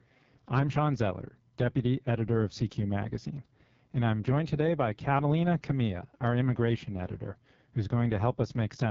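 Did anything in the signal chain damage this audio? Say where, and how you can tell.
Yes, at the codec stage: the speech has passed through the AMR wideband (HD Voice) codec, and the damage runs through the whole clip. Nothing appears above about 7.3 kHz, the wideband ceiling, and the speech sounds heavily rough and raspy. That points to AMR-WB's lowest mode, around 6.6 kbit/s, where the coarse pulse model of the vocal tract cannot capture the voice. A narrowband codec would cut off near 3.4 kHz instead, and packet loss would come and go rather than persist.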